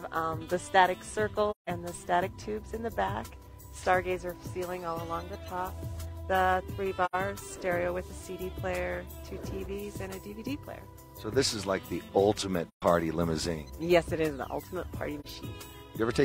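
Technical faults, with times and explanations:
1.50–1.69 s, 7.05–7.15 s, 12.68–12.82 s and 15.20–15.26 s: AAC frame loss with muting. The sound fades out into a soft-edged gap of about 171, 85, 128 and 43 ms, then fades back in. This fits four, two, three and one lost frames whose spectrum the decoder zeroed, with the overlapping windows smoothing each edge.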